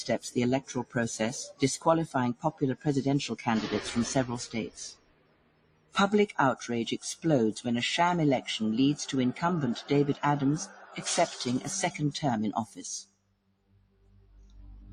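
Noise suppressor applied to music or sounds, present throughout: a suppressor tuned for speech treats steady tones, ambience and decaying tails as noise and pulls them down, while sharper onsets slip past. Across the clip its gain swings by roughly 20 dB, so held material sinks between attacks and the level pumps and flutters instead of sustaining, leaving the sound thinned and unsteady.

Sound cut by the noise suppressor, at 0.61–0.96 s (about 17 dB down), 2.34–2.86 s (about 18 dB), 4.47–5.96 s (about 19 dB), 10.66–11.02 s (about 10 dB), 12.66–12.81 s (about 14 dB) and 13.04 s to the end (about 19 dB): here the suppressor judged the material to be noise and ducked it harder than elsewhere. Sustained and fading parts collapse or have their decays chopped short, most severely across the second-long stretch near 5 s and the closing two seconds.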